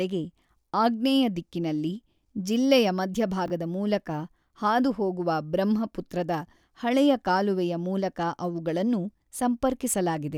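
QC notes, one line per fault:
3.46–3.50 s, chunks out of order: right after "ಆಗ್ನೇಯ ದಿಕ್ಕಿನಲ್ಲಿ ಜಿಲ್ಲೆಯ", a 20 ms chunk shows up one slot late and swaps places with its neighbour. Nothing's missing, but the three hard joins give a quick jumbled flutter before "ಮೂಲಕ ಹಾದುಹೋಗುವ ಬ್ರಹ್ಮಪುತ್ರದ ಹಳೆಯ".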